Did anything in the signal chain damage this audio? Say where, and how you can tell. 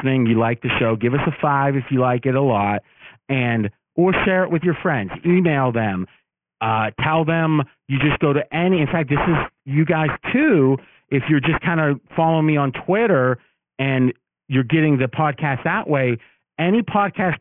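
Yes. Aliasing runs through the whole speech clip, from a sample-rate conversion stage. Sibilants sound gritty and metallic, and energy crowds up against a 3 kHz band edge, which points to a drop to a 6 kHz rate with no anti-alias filter. Content above 3 kHz folds back as false tones, roughly 15 dB below the signal.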